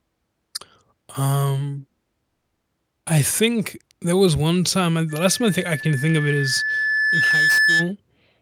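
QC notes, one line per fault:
5.09–7.92 s loudspeaker feedback squeal: after "was one time and", a 1.7 kHz tone swells over about two seconds as the mic re-amplifies its own loudspeaker.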